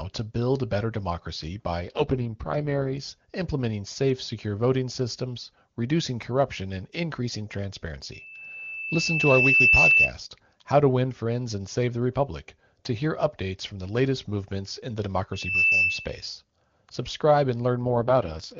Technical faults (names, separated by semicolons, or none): AMR rate drop; loudspeaker feedback squeal